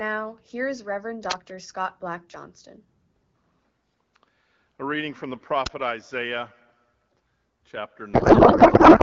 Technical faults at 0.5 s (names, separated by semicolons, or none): none